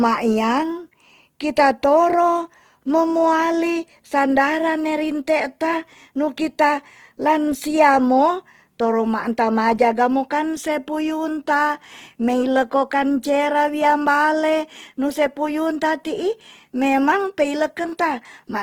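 Speech clip with plainly audible Opus compression throughout: content reaches 20.2 kHz, yet noise-filled bands sound grainy and rough, likely CELT-mode coding near 16 kbps.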